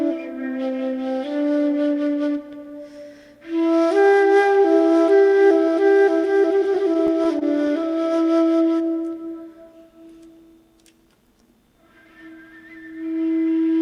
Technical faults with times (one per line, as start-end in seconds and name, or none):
6.75-8.06 scattered short gaps